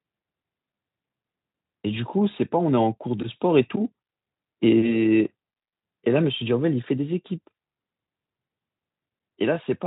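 No faults to report in this speech clip; the Speex coding path is working normally.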